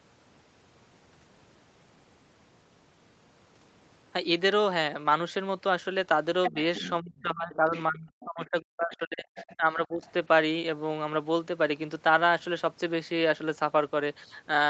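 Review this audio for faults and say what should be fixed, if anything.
Other side's voice leaking through: a second voice is audible from 6.44 to 7.21 s at nearly the talker's level, then in fainter scraps at 7.53–7.80, 8.21–8.50, 9.36–9.56 and 10.05–10.11 s. The likely cause is loudspeaker playback reaching the microphone that the echo canceller did not fully remove. A better-converged canceller, or a headset, would prevent it.

Speech suppressed in double talk: the talker's speech dips by roughly 15 dB around 6.51–6.56 s, then drops repeatedly by up to roughly 35 dB between 7.01 and 10.04 s, for about two seconds in total. This likely happens because the echo canceller turned down the near speech while both sides were talking. More accurate double-talk detection would prevent it.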